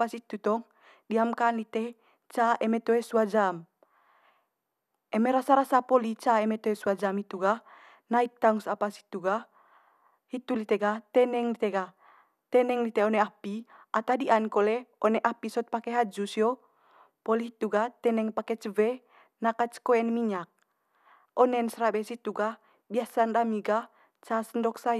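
No technical faults can be heard anywhere in this speech recording; the signal stays intact and steady throughout.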